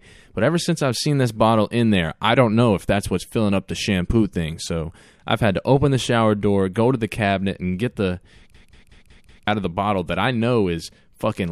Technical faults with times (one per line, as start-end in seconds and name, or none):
8.54-9.47 system hang loop